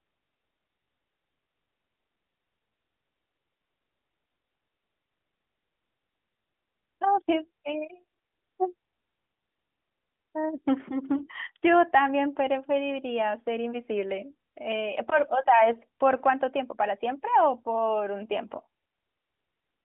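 At 11.18 to 11.24 s the speech briefly dips and warbles, the sound of lost AMR speech frames, which fits a single 20 ms frame failing its checksum. The decoder stretched the last good pitch and vocal tract settings over the gap with falling gain, so the sound smears before recovering somewhat rough. On a spectrogram, harmonics smear flat and fade before clean structure resumes. The waveform shows a short envelope sag. The narrowband line cuts everything above about 3.5 kHz.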